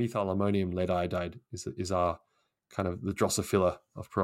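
Nothing stood out on listening to this recording.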